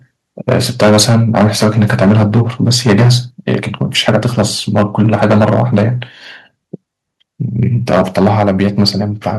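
In this speech recording, the likely cause is a microphone input set too high, causing microphone overload at 0.48–3.16, 3.47–3.55, 3.81–4.42, 4.76–5.84 and 7.89–8.89 s, with peaks pushed about 4 to 12 dB past the limit and flattened, giving loud syllables a harsh crackle. Software likely then stepped the microphone volume down at 0.53, 4.09 and 8.23 s, by about 2, 2 and 3 dB, so the level drops suddenly mid-distortion.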